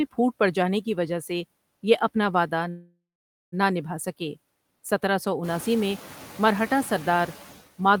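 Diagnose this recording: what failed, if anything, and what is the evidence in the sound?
Throughout the speech the background dips in the pauses and swells back under each phrase. These are noise suppressor artifacts from the call-processing stage. The suppressor estimates steady noise band by band and pulls those bands down by about 16 dB frame by frame. The room noise climbs about 14 dB around 5.5 s, still sitting about 18 dB below the speech.

From 2.69 s to 3.54 s the sound stalls. The last fragment is stretched into a fading buzz or hiss, then about 500 ms of near-silence, and the speech resumes exactly where it stopped. This is a call audio freeze, likely caused by network delay that left the receiver's jitter buffer empty. The receiver filled roughly 0.83 s with concealment rather than dropping anything, so nothing is lost, but everything after 3.54 s arrives about 829 ms later.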